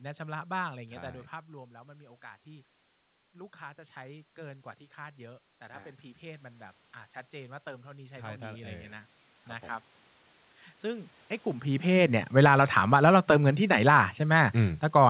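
A speech recording carried over a narrowband call path, with everything above 4 kHz missing, which points to G.711 A-law at 64 kbps. It has two automatic gain faults. From 3.32 s to 8.98 s there is automatic gain rising. After the level at the microphone drops by 14 dB, the gain control slowly adds about 10 dB to compensate. The voice and the room noise swell together rather than the voice alone coming forward. On a waveform the envelope widens steadily across those roughly 5.7 seconds, and a spectrogram shows the noise floor between phrases brightening in step with the speech bands. From 12.23 s to the end there is automatic gain falling. The sound sinks as the gain is pulled back, again taking the background down with it. The waveform shows the whole envelope tapering, and the spectrogram darkens evenly across all bands and in the gaps between speech. The level shifts around 1 s and 11.5 s sound like the talker moving relative to the microphone.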